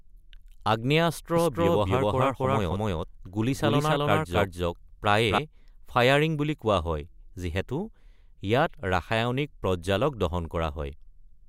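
From 1.36 s to 5.38 s, the speech was most likely captured a second time through a slower path and mixed back in, giving a doubled audio track. A full-band copy runs roughly 300 ms behind the original at close to the same level, so every syllable is heard twice in a dry echo with no decay or room colour. The copy cuts in abruptly at 1.36 s and drops out just as suddenly at 5.38 s.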